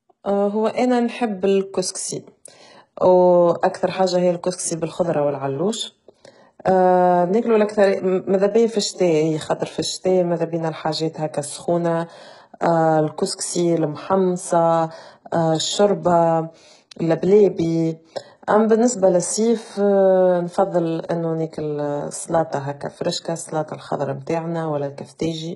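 From start to finish the speech carries heavy HE-AAC compression damage, likely from a very low bitrate, which fits something around 12 kbps. The upper band is not the original treble but a copy of lower bands shifted upward, so s sounds come out gritty and metallic, with harmonics that fail to line up. Ordinary low-bitrate coding would sound dull or swirly instead. Here the highs stay bright yet synthetic, and nothing survives above 11.1 kHz.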